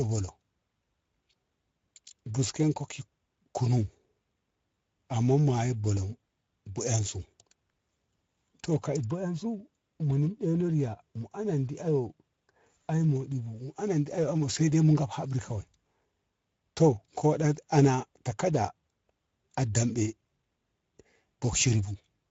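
It's a speech recording with Speex codec damage that's plainly audible from start to finish. The speech has the grainy, hoarse texture you get when this CELP coder doesn't have enough bits to model the excitation. The degree of damage points to a mid-range setting around 16.8 kbps. At that kind of setting, any content above 4 kHz is just a shaped noise fill rather than real detail, which adds to the rough, dull character.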